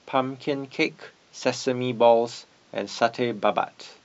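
A short speech clip with nothing technically wrong with it.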